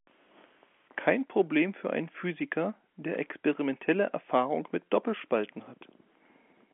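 Nothing stood out on listening; the speech keeps the narrow band of a telephone line, with nothing above about 3.7 kHz.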